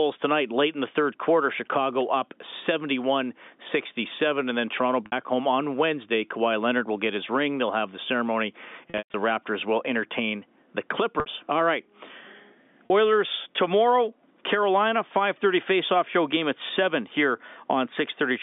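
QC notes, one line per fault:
5.06–5.12 s, 8.90–9.14 s, 11.20–11.26 s, 12.87–12.90 s, packet loss with pitch repetition: short gaps of 40–60 ms come out as a briefly held, buzzy tone, because the receiver loops the last pitch period to cover the missing audio. At 8.9 s, 180 ms is lost across 240 ms, with a longest run of 120 ms; the loop fades toward silence before the sound cross-fades back. The gap lengths fit 20 ms packets, over the band-limited G.711 line.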